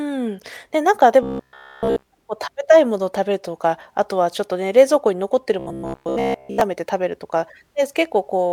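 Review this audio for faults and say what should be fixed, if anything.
Robotic sound from repeated short buffers appears twice in the speech. From 1.23 to 2.07 s the voice becomes a rigid, metallic buzz throughout. From 5.59 to 6.61 s the buzz returns for most of the stretch. Both buzzes sit at 66.8 Hz. The cause is likely audio arriving too seldom, so the last block is replayed while the real audio is skipped. That pitch fits a block of about 15 ms. To prevent it, enlarge the playback buffer and keep the audio thread from starving.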